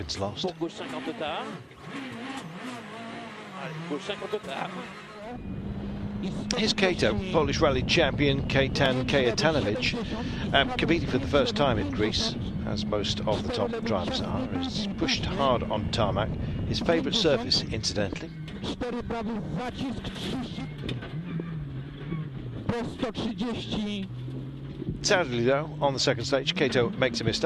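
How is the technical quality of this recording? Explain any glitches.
Nothing stood out on listening; no glitches are apparent anywhere in the recording.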